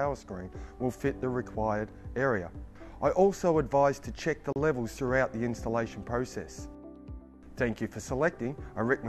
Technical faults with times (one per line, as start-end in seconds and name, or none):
4.53-4.56 gap at a join of encoded pieces